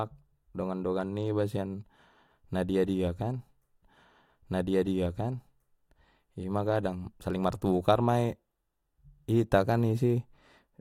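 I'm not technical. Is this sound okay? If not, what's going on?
No. Right after "na dia dia kan", at 3.82 seconds, the player jumps back and plays about two seconds of the speech a second time, until 5.80 seconds, before carrying on with "ima kadang saling martukar". This is a stream segment repeated fault: the same chunk of the stream was delivered or queued twice, so you hear it replayed, with a small blip where playback jumps back.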